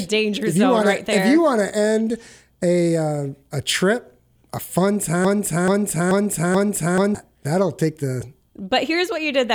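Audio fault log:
5.25–7.15 s, broken-record loop: a 0.43 s piece of speech repeats four times back to back, identical on every pass, and the speech that should have filled that span is missing. The likely cause is a stalled player or stream re-sending its last buffered fragment.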